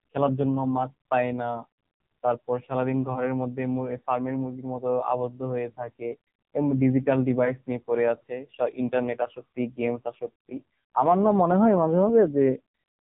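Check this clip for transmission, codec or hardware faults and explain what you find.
One fault is present: the whole clip has passed through the AMR narrowband mobile codec, and heavily. From start to finish nothing above about 3.8 kHz survives, and the speech comes out buzzy and synthetic, which fits one of the codec's low modes near 5.9 kbps. AMR-NB rebuilds the voice from a vocal-tract filter driven by a few pulses per 5 ms subframe, so at so few bits the excitation turns coarse. A spectrogram shows a hard ceiling at 3.8 kHz with smeared, blocky harmonics below it.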